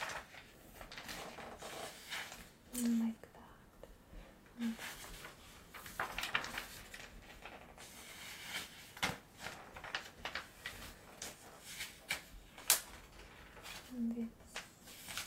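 No technical faults are present.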